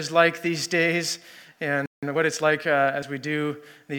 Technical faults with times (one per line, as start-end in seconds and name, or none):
1.86-2.03 playback stall
2.03-2.69 time-compressed catch-up
3.02 compressed frames skipped